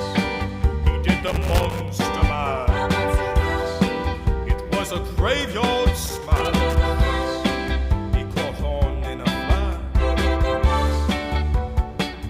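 At 1.27 s there's a burst of loose connector crackle that runs to about 1.89 s, and it comes back from 6.04 to 6.75 s. Each time, a worn or dirty contact is losing its grip and reconnecting many times a second, so the signal is chopped on and off in quick succession. You hear it as a ragged, irregular scratching laid over the sound for a bit over half a second.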